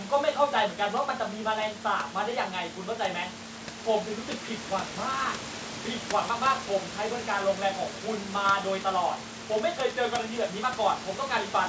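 Nothing's actually wrong with this bit of speech: it has the usual sound of a wideband call, with content stopping around 8 kHz as you'd expect from a G.722-style codec, and some room background sitting roughly 13 dB under the talking.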